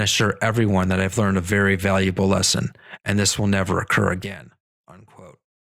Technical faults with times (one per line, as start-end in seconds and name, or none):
4.08-4.52 zipper noise